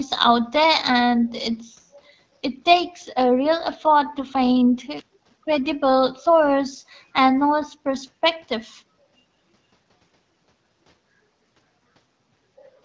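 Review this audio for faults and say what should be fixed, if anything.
Nothing here needs fixing: the speech sits in a normal wideband call path, with nothing above 8 kHz from the call microphone processing and the light coding character that fits AMR wideband (HD Voice) at 12.65 kbit/s.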